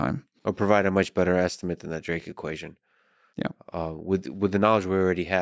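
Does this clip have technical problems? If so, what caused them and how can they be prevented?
No, there are no technical problems to address here.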